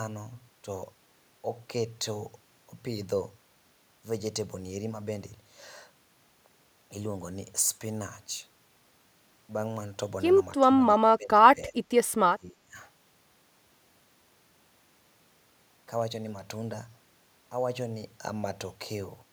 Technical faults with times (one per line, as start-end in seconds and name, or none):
10.60-11.96 speech suppressed in double talk
12.28-12.77 speech suppressed in double talk